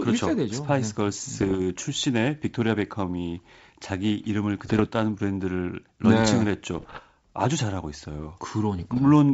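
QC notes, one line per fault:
1.39–1.57 s, 4.66–4.81 s, 6.78–7.01 s and 8.78–8.99 s: bit errors on an ADPCM link. Each burst, lasting about 0.15 to 0.23 s, brings pops and a rough, gritty texture with brief jumps in level. A flipped bit corrupts the decoded sample and also throws off the decoder's adaptive step size and predictor, so the damage carries on for several milliseconds after each hit. The error density is low, around one percent. The underlying G.722 coding stays clean, with wideband clarity consistent with 64 kbit/s operation.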